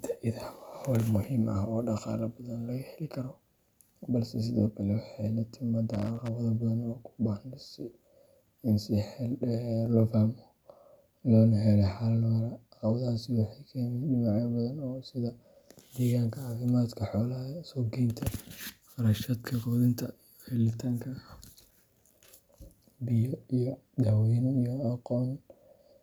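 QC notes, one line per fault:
5.93–6.28 s and 21.59–21.83 s, loose connector crackle: two short irregular bursts of scratchy crackle, the first right after "sidoo kale waxay la" and lasting about a third of a second, the second about a quarter of a second. A worn or dirty contact is making and breaking as it shifts, so the signal gets chopped on and off, which gives that gritty, uneven texture.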